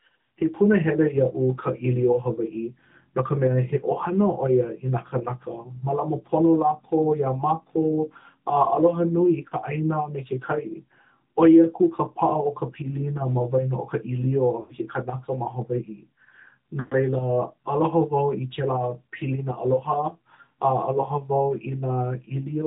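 Speech that has passed through the AMR narrowband mobile codec throughout: nothing survives above 4 kHz, and the voice has the plainly audible buzzy, synthetic edge of a vocal-tract model rebuilt from sparse pulses, which points to a mid-range mode of about 10.2 kbps. A plain low-pass filter would cut the top just as hard but leave the voice natural, so that synthetic grain is what marks this as the codec. Lost AMR speech frames also break the sound three times. At 9.48–9.54 s a 40 ms gap gives a short dip or warble. At 14.60–14.76 s (100 ms) and 16.80–16.95 s (120 ms) the decoder holds on to the last good pitch and vocal-tract settings, so the sound smears into a drawn-out tone and fades toward silence before the voice returns briefly weak or rough. A plain dropout would be a hard cut to silence, whereas this fading, pitched stretching comes from the decoder concealing frames that failed their checksum.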